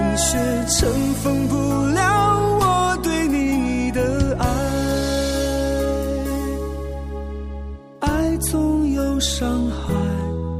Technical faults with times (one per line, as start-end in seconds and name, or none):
none